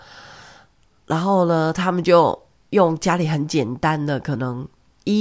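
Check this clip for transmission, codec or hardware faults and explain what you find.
No faults can be heard anywhere in the speech, and the signal stays continuous and stable throughout.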